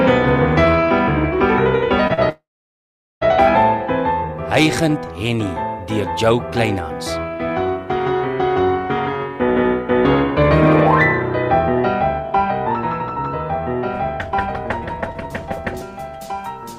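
Short stalls from a late packet occur at 2.07 to 2.12 s and again at 2.14 to 2.19 s. Each time a packet missed its playout moment and the jitter buffer ran dry, so the receiver held the last sound for about 22 ms and then 37 ms before resuming from the same point. Nothing is lost, but the sound briefly drags with a faint buzzy smear, and the delay grows by the same amounts.

A call audio freeze follows at 2.29 to 3.23 s, likely caused by packets being held up in transit long enough to empty the jitter buffer again. The receiver extended the last sound into a fading buzz that gives way to silence for roughly 780 ms of the 919 ms gap. When the audio returns it picks up where it stopped, so about 0.9 s of dead time has been inserted rather than anything removed.

A jitter buffer speed-up runs from 9.62 to 10.51 s. The buffer was holding more audio than its target, so the receiver trimmed many tiny pitch-period slices in quick succession, about 50 ms in total. 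Playback runs at roughly 105% speed with the pitch unchanged, and that stretch sounds slightly rushed.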